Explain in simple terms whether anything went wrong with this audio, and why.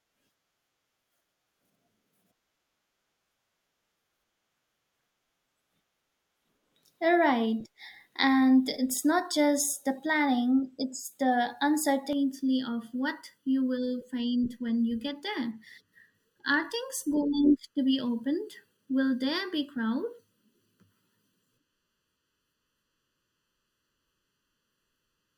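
From about 12.1 s, just after "the planning it's the", one channel runs slightly late, by under a millisecond, and the two are mixed together. This channel delay (comb filtering) cancels some pitches, starting around 700 Hz, so the speech sounds hollow and phasey until the end.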